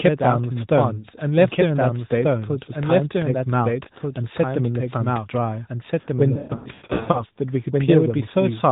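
From the start, every bit of the speech comes back a second time, about a second and a half later and roughly as loud, a dry full-band copy with no room tail. That doubled audio track is likely a second capture path running behind, or two copies left misaligned.

Between 6.34 and 7.24 s you get lost AMR speech frames: about 0.54 s of dropouts scattered over 0.8 s, the longest run 0.12 s. The decoder stretches the last sound and fades it, so things warble, smear and dip, then return weak over the narrowband phone-band sound.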